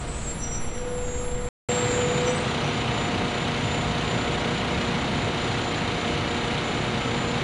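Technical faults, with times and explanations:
throughout: 4-bit ADPCM compression. Each sample is coded as a coarse 4-bit step from a prediction, so a gritty hiss rides on every loud sound and rises and falls with it. Sharp attacks distort where the step size lags behind. Nothing is present above 10.7 kHz, and the data rate points to roughly 89 kbps, which fits a sample rate near 22 kHz. On a spectrogram, a noise haze fills the band under louder events and stops at a flat ceiling.
1.49–7.43 s: input switched to a poorer device. After a 200 ms gap, the sound returns duller, with its top end now ending at 8.9 kHz instead of 10.7 kHz. It is a few dB different in level and has a new noise floor roughly 40 dB below the signal. The likely cause is the recording moving to another microphone or a headset's call profile. On the waveform, a short flat gap appears, followed by a level step. The spectrogram shows the ceiling drop and a fresh background band from that point to the end.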